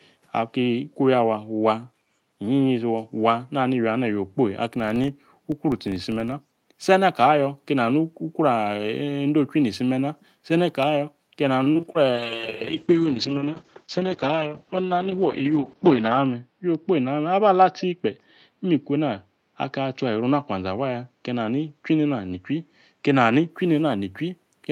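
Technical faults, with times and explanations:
0.01–0.05 s, echo leak: a very faint, brief copy of the speech surfaces at the very start, sitting far below the main signal. It arrives about 0.43 s behind its source, which is likely what happens when the far side's loudspeaker output reaches its microphone and the echo canceller fails to subtract all of it. The residue travels back down the line as a delayed scrap of the same speech rather than new sound.
3.40–3.51 s, 10.30–10.46 s and 11.11–11.24 s, background gated by the echo canceller: the room tone behind the speech dips abruptly three times, by about 21 dB, 13 dB and 9 dB. Each dip lasts roughly a tenth to a sixth of a second. The canceller, judging that loudspeaker playback was present, pulled the microphone level down hard and then released it. That is why the ambience briefly vanishes and snaps back.
4.76–6.38 s, filter restarted on every block: a low buzz at 25 Hz rides under the speech for this stretch. 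A filter here is being reset to silence at the start of every processing block, so each block opens with a small transient. Repeating at the block rate, those transients merge into a buzz whose loudness rises and falls with the speech level, because larger signals produce larger start-up jumps.
11.63–11.97 s, repeated packet loss (robotic sound): within this third of a second the audio turns choppy as holes arrive one after another, the longest about 30 ms. Roughly a third of the span is concealment, with about 110 ms synthesised by stretching the preceding sound and about 80 ms simply missing. Because each patch barely ends before the next loss, the speech is choppy with pieces dropped out.
12.11–23.56 s, call bitrate drop: for most of the remaining clip the speech sounds coarser, rougher and more muffled, with the top of the spectrum falling from about 20 kHz to 6 kHz. The sound points to the encoder being pushed from around 32 kbps to about 7 kbps, held at its lowest for about 4.1 s. 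With so few bits, Opus quantises coarsely and discards high frequencies, producing a rough, dull quality until the rate climbs again.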